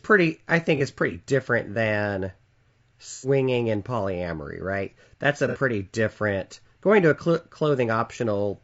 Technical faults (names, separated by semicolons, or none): low-delay AAC compression; AAC frame loss with concealment